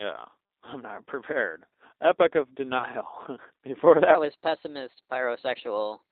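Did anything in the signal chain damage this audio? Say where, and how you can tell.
Yes. At the codec stage, the whole clip has passed through a G.729 codec at 8 kbit/s. The speech sits in a narrow line band of about 300 Hz to 3.7 kHz, with nothing above, and carries the plainly audible rough, slightly synthetic texture of a coder that rebuilds each frame from a vocal tract filter, a pitch predictor and a few pulses. A simple low-pass filter would dull the sound without adding that buzzy, reconstructed grain.

On the network side, between 2.78 and 2.85 s there is VoIP packet loss concealed by the speech codec. Roughly 30 ms of audio went missing, which fits a single lost packet. Rather than a gap or a click, the decoder stretches the last pitch and filter into a brief buzzy tone or coloured noise that fades, and the speech stays weak for a moment after it resumes. That smooth extrapolation and slow recovery is what separates it from a dropout or a buffer glitch, which would cut hard to silence or repeat a block.

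At playback or editing, from 4.15 s to the end at 6.12 s the section runs at the wrong speed, 1.17 times too fast. The speech turns hurried and rises about three semitones, with pitch and tempo shifting together at the boundary, likely because an editor or player ran that part against the wrong clock. A pitch-shift effect or time-stretch would change only one of the two, and here both move at once.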